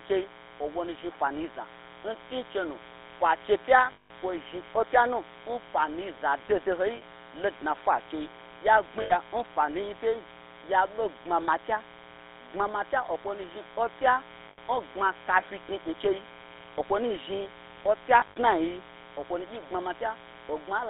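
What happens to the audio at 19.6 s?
A mains buzz runs under the speech at 19.6 s, as it does through the whole clip. Its spiky interference repeats twice per 60 Hz cycle, so you get a stack of 60 Hz harmonics climbing well up into the kilohertz range. To the ear that's a steady, raspy buzz sitting fairly high in the mix, not far below the speech itself, and it never lets up around this moment.

The speech also carries the GSM full-rate codec sound across the whole clip, 19.6 s included. That codec rebuilds the vocal tract from a model and feeds it a thinned-out, regularly spaced pulse excitation, so voiced sounds come out gravelly and buzzy. The audible band runs from about 300 Hz to 3.7 kHz, with nothing above, which fits the old 13 kbps phone codec. The damage is plainly audible: a rough, muffled, telephone-like texture.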